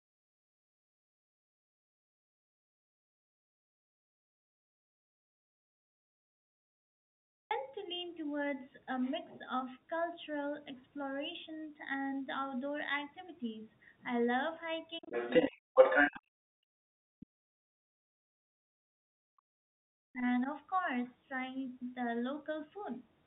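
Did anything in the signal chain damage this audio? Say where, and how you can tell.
Yes. The recording opens with an audio dropout to silence already under way at 0 s, lasting until about 7.51 s. That stretch is silent with no room tone at all, which points to input loss at the device or buffer stage rather than a quiet talker, most likely a lost capture link with the recorder still writing samples. On a waveform it is a dead flat line, and on a spectrogram a completely empty band across every frequency.

Between 15.0 and 20.49 s, the call processing stage shows speech suppressed in double talk, most likely the echo canceller ducking the talker while the far end was active. The dips come at 15.0–15.14 s (about 10 dB), 15.46–15.95 s (about 40 dB), a long hole from 16.11 to 20.27 s (about 40 dB, roughly four seconds) and a slight dip at 20.43–20.49 s (about 5 dB). They show as abrupt gaps or dimmed patches in the spectrogram and a collapsing envelope in the waveform.

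Overlapping those dips, there is the other side's voice leaking through, which points to residual loudspeaker echo the canceller likely failed to remove. It runs from 15.02 to 15.55 s at a level fairly close to the talker's, and again from 15.76 to 16.2 s, much quieter. On a spectrogram it appears as a second, fainter harmonic pattern that does not follow the talker's pitch, filling the moments where the main voice has been pulled down.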